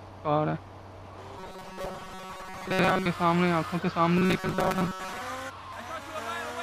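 From 1.38 to 3.06 s and 4.17 to 5.21 s, robotic sound from repeated short buffers: a rigid 188 Hz metallic buzz, likely from looping roughly 5 ms chunks. Unlike a plain dropout, there are no gaps.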